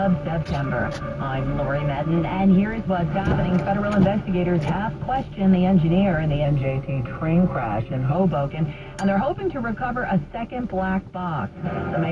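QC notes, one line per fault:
6.45–8.14 s, wrong sample rate: for this stretch the sound runs slow and sits about 1.5 semitones low, at 0.92 times speed, which fits audio made at 24 kHz being played at 22 kHz. Because pitch and tempo drop together by one ratio, it differs from a pitch shift or time stretch, which alter only one.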